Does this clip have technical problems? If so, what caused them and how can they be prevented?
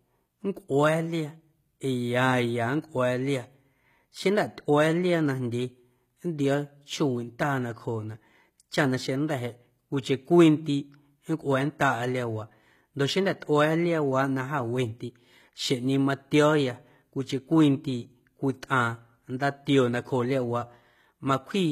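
Yes. The audio was likely passed through HE-AAC compression at a low rate, around 20 kbps. Only the lower spectrum was coded, and the treble up to about 14.9 kHz was rebuilt from copied lower bands, so its harmonics don't match and the codec damage is plainly audible throughout. To prevent it, encode at a higher bitrate or with a full-band codec.

At 20.61 s the stream likely lost a couple of samples. The waveform jumps straight to a later value, producing a single sharp click, far too brief to remove any sound. To prevent it, use larger buffers and reliable clocking so no samples are skipped.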